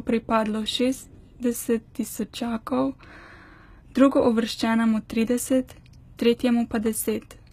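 Throughout the speech, the signal has likely been through HE-AAC compression at a very low rate, consistent with roughly 20 kbps. Only the lower spectrum is coded and the treble is synthesised from copied bands, so s sounds come out gritty and metallic, with nothing above 14.9 kHz.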